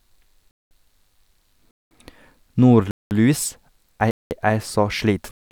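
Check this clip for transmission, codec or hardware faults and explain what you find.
The speech is interrupted by a gap between chunks, repeating five times. Silent holes of 200 ms start at 0.51, 1.71, 2.91, 4.11 and 5.31 s. Each after the first follows about one second of sound. No audio is lost, but the joins between chunks leave pauses at a steady 1.2-second rhythm.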